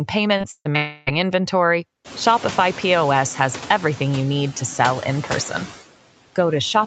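Noise suppressor artifacts run through the whole speech clip: steady background noise is pulled down by about 16 dB between phrases and rises under speech. From 0.37 to 0.77 s, repeated packet loss produces choppy, robotic speech as four short gaps, the longest 138 ms, are patched by repeating the preceding sound. From 0.77 to 1.09 s the last sound is stretched into a roughly 300 ms smeared buzz with the speech absent, likely a long network dropout concealed by the receiver.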